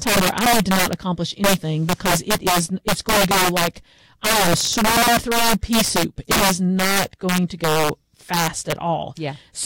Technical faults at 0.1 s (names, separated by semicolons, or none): integer overflow